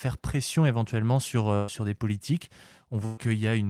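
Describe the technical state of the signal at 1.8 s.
At 1.8 s, a burst of packet loss ends (1.55 to 1.80 s). The last sound was extended for about 126 ms, then fading, before the speech resumed further on.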